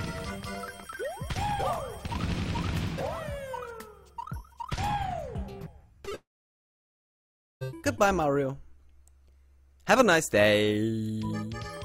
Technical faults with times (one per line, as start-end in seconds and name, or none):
6.01-6.13 short concealed packet loss
6.15-7.63 long network dropout